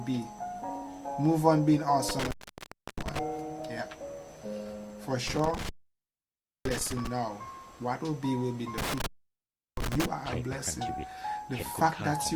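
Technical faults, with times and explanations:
2.09–3.19 s, 5.27–7.07 s, 8.78–10.06 s: intermittent contact. A loose connection opens for about 0.67, 0.96 and 0.71 s, dropping the sound to faint hiss with crackle at each edge. The waveform collapses to near-flat between sharp spikes, and the spectrogram shows dark gaps bounded by vertical broadband streaks.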